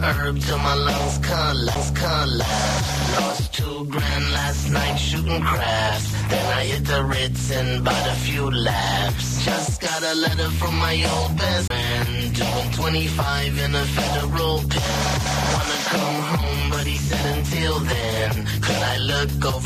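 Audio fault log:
1.75 s and 11.68–11.70 s, CD skip: a knock or disc flaw makes the laser hop to another turn of the spiral, so there's a tick and a tiny dropout, barely a hundredth of a second the first time and a few hundredths the second, then the sound picks up from a different spot.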